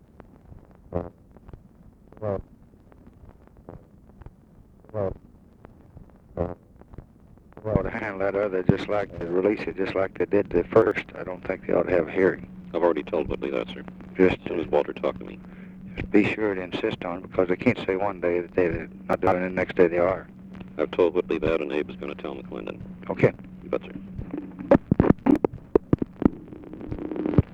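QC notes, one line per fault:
7.94–8.03 s, 10.82–10.91 s, 25.26–25.36 s: chunks out of order. Each time one 46 ms block was delivered one chunk late and played after the block meant to follow it. Nothing is lost, but the swapped order creates hard joins and a brief jumbled stutter. The block length fits a 2048-sample buffer at 44.1 kHz.
19.13–19.32 s: chunks out of order. Here a 46 ms block was written three chunks late and lands after three blocks that should come after it. That whole 0.19 s stretch sounds scrambled, with hard joins where the misplaced block is spliced in.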